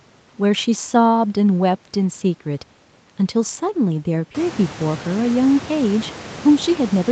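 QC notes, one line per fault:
No faults found: the speech passes through normal call microphone processing with nothing above 8 kHz, and the room noise rises by about 19 dB at around 4.5 s but stays about 18 dB below the speech.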